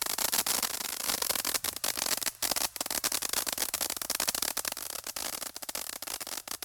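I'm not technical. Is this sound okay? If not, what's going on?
No. Between 0.65 and 1.08 s, and again from 4.72 s to the end, the sound abruptly gets quieter. The likely cause is one channel dropping out: one side of the stereo signal goes silent, so only half reaches you.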